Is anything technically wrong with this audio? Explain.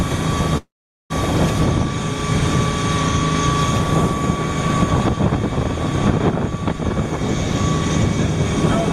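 Yes. From 0.57 to 1.12 s there is a call audio freeze: the last sound carries on as a brief fading buzz or hiss, then about 0.43 s of silence, before the audio resumes where it stopped. Nothing is lost, but everything after arrives about 0.53 s late, likely from delayed packets draining the jitter buffer.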